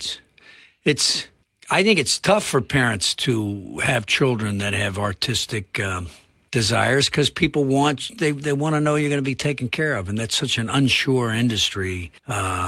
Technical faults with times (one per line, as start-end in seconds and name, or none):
none